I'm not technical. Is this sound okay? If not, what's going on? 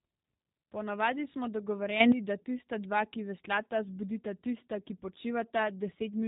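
No. The speech sounds muffled and slightly rough, robotic throughout, typical of the G.729 codec, a phone-call compressor that rebuilds voices and discards everything above about 3.8 kHz. From 2.00 to 2.12 s there's a sudden gain jump: the volume abruptly leaps much louder, likely from a level setting applied instantly instead of smoothly.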